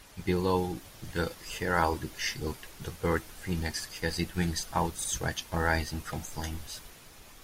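At 5.04 to 5.10 s the speech stutters: a 64 ms stretch plays twice in a row, a clear case of repeated frames. A short run of compressed frames, consistent with two frames, reached the decoder a second time, so it decoded the same audio again and the clip runs 64 ms longer. Unlike a dropout or concealed packet loss, nothing goes missing. The same fragment comes back.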